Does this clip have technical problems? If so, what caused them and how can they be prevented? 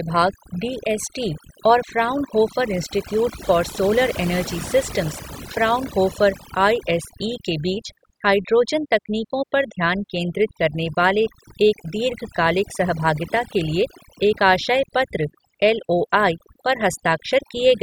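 Yes. Throughout the clip, the background drops to near silence dotted with twinkling specks. This is overdone noise removal: a noise reduction setting that was too strong muted individual frequency bands that sat close to its noise estimate, and the quieter parts of the speech were cut along with the noise. To prevent it, use a gentler reduction amount and compare the processed audio with the original before committing.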